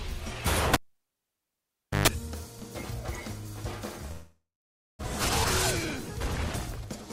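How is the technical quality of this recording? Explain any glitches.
The recording has two glitches.

From 0.74 to 2.08 s, a cable pulled and plugged in. A pop opens about 1.29 s of near silence. A 50 Hz mains buzz of about 128 ms follows, then a pop at reconnection.

From 4.11 to 5.05 s, the sound decays into hiss, then about 0.52 s of silence. This is likely a long network dropout. Roughly 0.6 s of audio never returns.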